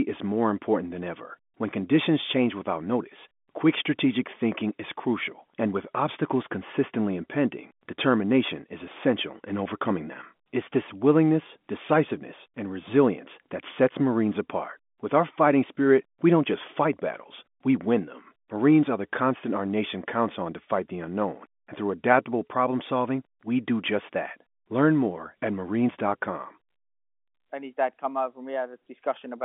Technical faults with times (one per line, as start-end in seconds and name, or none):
none